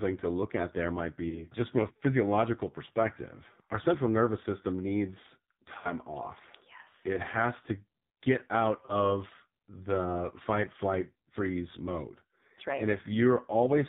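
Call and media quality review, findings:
AMR narrowband mobile codec, whole clip: nothing above 4 kHz, heavy buzzy, synthetic coloring on the speech. Damage level points to a low AMR-NB mode, around 5.9 kbps.

Lost AMR speech frames, three events: 1.30–1.46 s between "look at there might" and "just from a physiological"; 5.78–5.93 s after "central nervous system needs"; 8.86–8.95 s after "has to get out". Decoder repeats the last pitch and vocal tract settings with falling gain, giving brief dips and warble. The 5.78 s event loses the most audio, three consecutive frames (60 ms).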